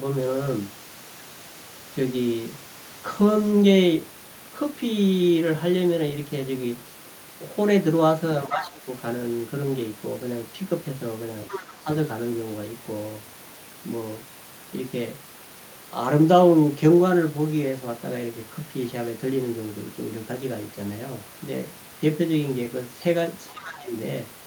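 At 8.46 to 8.87 s the speech sinks by roughly 15 dB for about 0.4 s, likely speech suppressed in double talk as an echo canceller ducks everything while both sides talk. It is a level dip rather than a hard dropout to silence. Inside it, from 8.63 to 8.70 s, a faint second voice about 20 dB down slips through. That is the other side's voice leaking through, likely residual loudspeaker echo. It is a different talker, not a smeared copy of this one, which sets it apart from room reverb. Around 11.5 s the pattern repeats. A louder leak, only about 10 dB below the speech, runs from 11.49 to 11.74 s. Brief shallow dips of about 5 dB fall at 11.47 to 11.52 s and 11.83 to 11.88 s. At 23.48 to 23.66 s a very quiet leak about 25 dB down appears, followed by another deep suppression of roughly 15 dB from 23.52 to 23.92 s.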